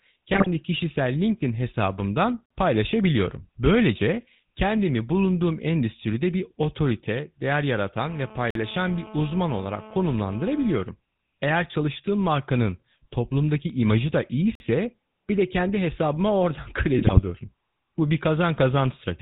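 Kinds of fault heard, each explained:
GSM full-rate codec: The whole clip has that buzzy, gravelly vocal-tract-plus-pulses sound, with nothing above 4 kHz, and the damage is plainly audible.
GSM bit errors: Corrupted frames reach the decoder around 0.32 to 0.47 s and 16.99 to 17.21 s, so the speech squawks and gargles briefly.
Gap between chunks: Short holes of about 48 ms every 6 s, at 2.46, 8.51 and 14.55 s, the last right after "markanın toplumdaki imajı da".
GSM phone buzz: A raspy 217 Hz buzz with lots of harmonics, about 20 dB under the speech, holds steady from 8.02 to 10.81 s, starting after "endüstride bir otorite değer".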